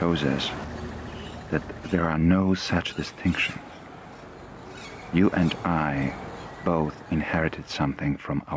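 The audio has gain pumping from start to finish: its level keeps getting pulled down on loud moments and rising again, a swing of about 5 dB, which likely comes from gain set too high for the mic with a fast limiter clamping down each time. The call microphone processing behind it tops out around 8 kHz.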